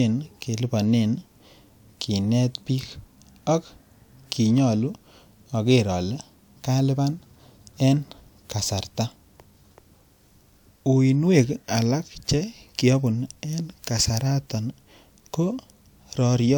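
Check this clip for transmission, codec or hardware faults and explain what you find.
Nothing faulty can be heard anywhere in this speech.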